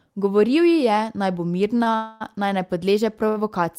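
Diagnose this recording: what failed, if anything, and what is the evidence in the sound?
Short stalls from a late packet occur at 1.78 s, 1.84 s and 3.29 s, in the network and jitter-buffer stage. After "ji je naj bo" the sound is held for about 17 ms, then 26 ms, and later 74 ms. Nothing is lost. Playback resumes exactly where it paused.

A call audio freeze runs from 1.96 to 2.23 s, just before "naj ne". About 0.24 s of the last sound is stretched into a fading buzz that never reaches silence, then the audio continues intact. Packets held up in transit likely emptied the jitter buffer.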